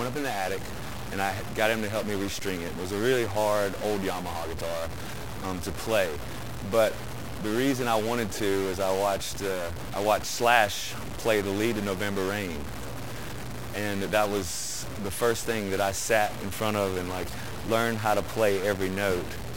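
From start to finish, one data bit in the converter or its wiring has likely become stuck, holding at a fixed value instead of following the signal. About half the samples land off by that bit's weight, a step of roughly -30 dBFS, in a pattern that tracks the waveform. The result is a harsh, buzzy distortion riding on everything, and because the stuck bit flips with the sign of small values, even the quiet stretches fill with a gritty noise floor.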